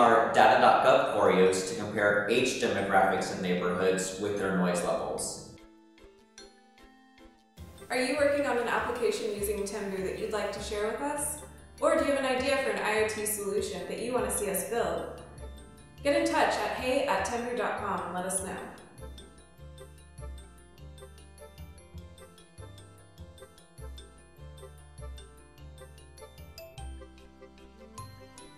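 No dropouts, clipping, glitches or other transport or processing faults turn up anywhere in the recording.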